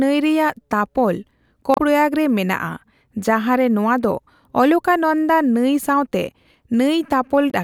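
Damaged data in a compressed stream hits this speech clip at 1.74 to 1.80 s and 7.48 to 7.54 s: corrupted frames make the decoder lose sync, producing brief glitches.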